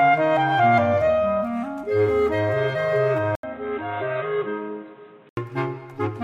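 At 3.35 s the sound drops out for about 80 ms, then returns dull and boxy, with nothing above 4 kHz, a level roughly 5 dB lower, and a fresh background noise sitting about 30 dB under the signal. At 5.37 s the full band comes back. This is most likely the input switched to a poorer device. The short gap, the new noise floor and the level shift separate it from a simple low-pass filter or a codec narrowing its bandwidth.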